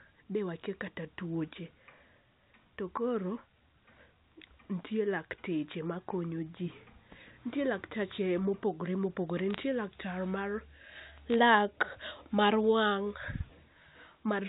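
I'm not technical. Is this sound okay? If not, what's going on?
No. This is speech carried over a digital phone line, and in two short spots the line suffered bit errors on a digital phone line: a small fraction of the ones and zeros arrived flipped, so individual sound samples came out wrong. A bad sample hit in one of its most important bits becomes a sharp tick. Between 9.50 and 9.63 s, and again between 11.30 and 11.34 s, you hear brief crackle sitting on top of the speech, while the talking itself stays unchanged underneath.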